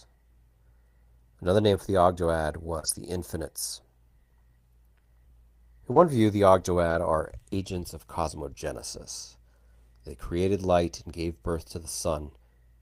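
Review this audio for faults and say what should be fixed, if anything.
Lost packets rebuilt from error correction show up four times: 1.73 to 1.75 s just before "for the", 2.83 to 2.97 s, 5.96 to 6.02 s just before "view the", and 6.86 to 6.96 s between "view the" and "are agents of cosmogenesis". There are no gaps. The decoder played the low-bitrate backup copies carried in the following packets, so those stretches (20, 80, 40 and 60 ms) come out rougher and grainier. Prevention: a larger jitter buffer or a steadier network path would keep the originals from going missing.

Short concealed packet losses appear twice, at 2.79 to 2.85 s and 5.92 to 5.98 s. Both times the audio that should have arrived was simply missing, so the receiver extended the last bit of sound for about 35 ms and crossfaded back in. That produces a brief smeared wobble, and each one runs straight into one of the rebuilt stretches above. 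Prevention: same fix as above, with a bigger jitter buffer and a less lossy link.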